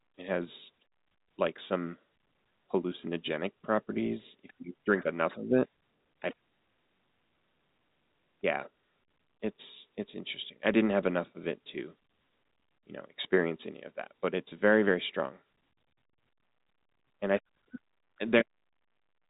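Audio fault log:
No faults: the speech has the narrow band of G.711 telephone coding, with nothing above 3.8 kHz and little or no audible coding noise riding under the signal.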